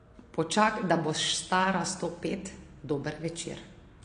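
From start to finish, a low-bitrate encoder has likely thrown away detail, consistent with AAC compression at around 32 kbps. Nothing survives above 9.8 kHz, so the speech sounds dull, and sibilants take on a plainly audible smeared, warbling, fizzy texture.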